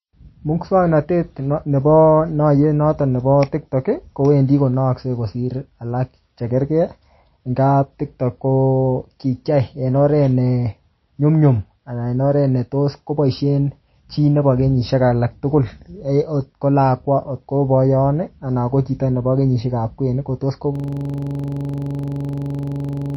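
From start to finish the speech carries what is likely MP3 compression at a very low bitrate, plainly audible. Nothing reaches above 5.8 kHz, so sibilants lose their edge and the sound turns dull and watery, with swirling where weak frequency lines flicker in and out between frames. On a spectrogram there is a hard horizontal ceiling at 5.8 kHz with blank space above it, and speckled, patchy holes in the upper bands below it.

At 20.76 s a system hang loop begins and runs to the end of the clip. The playback hardware kept cycling one 42.67 ms piece of audio while the system froze, which fits a 2048-sample buffer. It repeats dozens of times at 23.4 Hz, a rough, rapid stutter bordering on a buzz with no forward movement. The waveform shows an identical short block tiled edge to edge, and the spectrogram shows vertical stripes at exactly even spacing.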